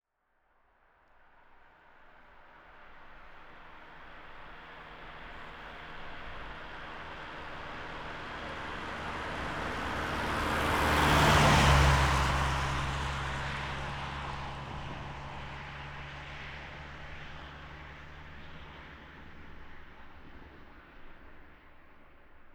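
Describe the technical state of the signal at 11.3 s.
At 11.3 s the signal is intact, with no technical fault present at that moment.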